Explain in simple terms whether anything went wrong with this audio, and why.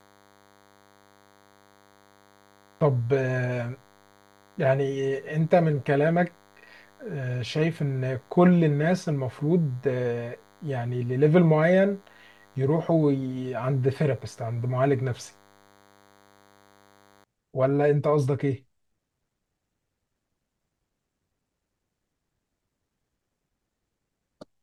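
A faint, thin DECT cordless phone buzz sits under the speech from the start to about 17.2 s: a nearby cordless phone's radio bursts, 100 per second, leaking into the audio.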